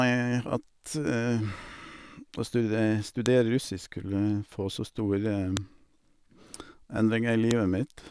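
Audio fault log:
3.26 s, 5.57 s, 7.51 s: file header played as audio. Each moment brings a sharp, loud click or snap that cuts across the speech without regard to what is being said, lasting only a millisecond or so. The clicks mark points where separate WAV pieces were joined or streamed with their headers left in place, so the few dozen bytes of header data were read as sample values and played back as a brief burst of noise.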